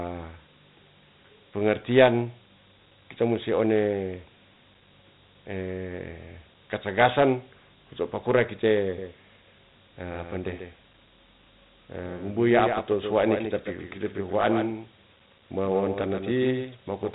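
Dialogic VOX ADPCM coding runs through the whole recording. Each sample is reduced to a 4-bit step from a predicted value, leaving a gritty hiss that follows the speech and nothing above 3.9 kHz, which fits 32 kbps at 8,000 samples a second.

A doubled audio track appears at 8.98 s, right after "katagasan kuto pakura", and lasts to the end. A second full-band copy, about 5 dB quieter, trails by roughly 150 ms with no room colour, most likely from an edit holding two out-of-step copies.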